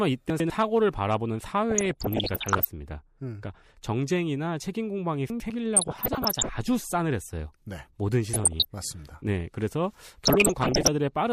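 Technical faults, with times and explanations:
0.3–0.5 s and 5.3–5.5 s: chunks out of order. Each time, a brief jumbled moment in the speech, as if a sliver of sound stepped backwards. A 100 ms chunk was delivered one chunk late, so it plays after the chunk meant to follow it. Nothing goes missing; the two pieces simply swap places, creating three hard joins where unmatched waveforms meet.
1.70–2.69 s, 5.76–6.50 s, 8.33–8.65 s and 10.25–10.88 s: DAB burbling. Burbling noise sits over the speech through each stretch. Weak reception let bit errors, on the order of one percent of bits, slip past error correction into the MP2 data. Corrupted samples put short noise blips into single sub-bands, and corrupted scale factors make individual sub-bands leap in level for up to a frame, and many frames in a row are hit.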